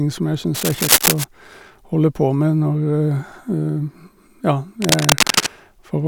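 Just after "som jeg", from 0.54 to 1.24 s, and again from 4.82 to 5.47 s, cable scratch noise rustles over the speech at roughly its own loudness, likely from a worn connector being moved. Its dense, irregular grit sets it apart from single isolated clicks or steady hiss.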